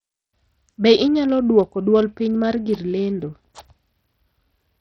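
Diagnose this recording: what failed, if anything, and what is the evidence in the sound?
The codec stage failed. Throughout the speech the treble sounds gritty and flickers, and nothing passes above 14.4 kHz. A spectrogram shows a hard ceiling with the top bands blinking on and off. This is likely Bluetooth SBC compression starving and coarsely quantising its sub-bands, which fits a bitrate around 64 kbps.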